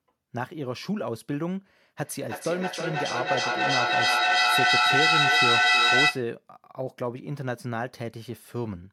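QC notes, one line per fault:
2.05–6.33 s, feedback echo between two devices: the speech starts coming back around every third of a second or so, each pass thinner and more ringing. It sounds like two devices on the same call in one room, with one playing out what the other's mic sent and that mic catching it again. Neither echo canceller touches the other device's playback. The loop is hot here, so the repeats stack up instead of fading and peak at about 8 dB above the speech itself.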